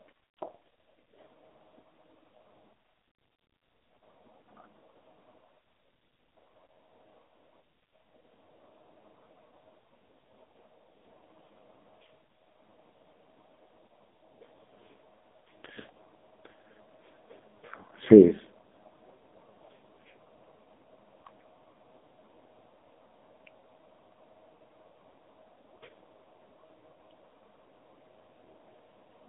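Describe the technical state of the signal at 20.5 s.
At 20.5 s you're hearing the AMR narrowband mobile codec, and it runs through the whole clip. The speech is squeezed into a phone band of roughly 200 Hz to 3.7 kHz, with nothing above 3.8 kHz, and the heavy buzzy, synthetic coding fits a low rate near 5.15 kbps.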